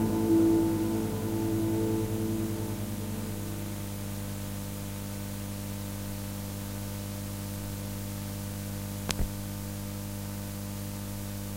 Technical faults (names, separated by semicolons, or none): none